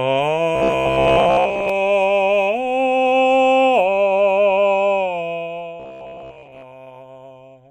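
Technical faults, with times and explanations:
0.56–1.70 s and 5.80–6.64 s: robotic sound from repeated short buffers. The music becomes a rigid metallic buzz at 66.7 Hz, likely from re-looping a 15 ms buffer for most of each span.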